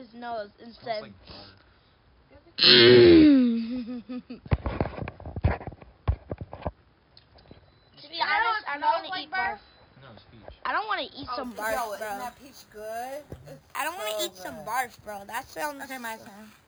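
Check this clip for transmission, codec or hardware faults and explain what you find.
One fault is present: imaging from sample-and-hold upsampling. It starts at 11.44 s and lasts to the end. The sound points to an 11 kHz stream raised to 44.1 kHz by repeating samples, unfiltered. Mirrored copies fill roughly 5.5 to 11 kHz, about 14 dB below the signal. They add a bright metallic fizz that tracks the sound's level.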